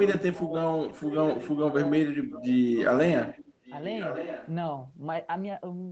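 Speech with an echo leak. A faint delayed copy of the talker appears from 3.26 to 3.77 s and again from 3.94 to 4.49 s. It trails by about 1.14 s, roughly 15 dB then 10 dB below the speech. Likely cause: a loudspeaker echo the canceller missed.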